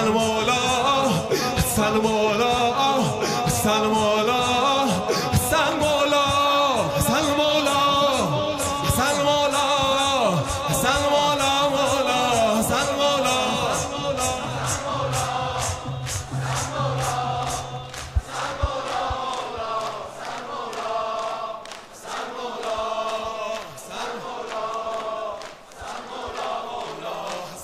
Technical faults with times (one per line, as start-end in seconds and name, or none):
5.72-5.83 loud pop
10.97-10.99 loud pop